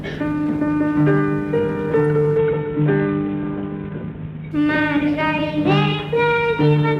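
The audio goes through a Bluetooth SBC bit pool drop from 2.38 s to 4.51 s. Over those two seconds the treble dulls sharply. A gritty, grainy noise rises under the sound. Both clear up after 4.51 s. The link seems to have been congested, so the encoder cut its bit budget to keep the stream alive. The top sub-bands lost their bits, and the rest were quantised coarsely. The depth of the loss fits a bit pool falling from 28 to 5, near 54 kbps.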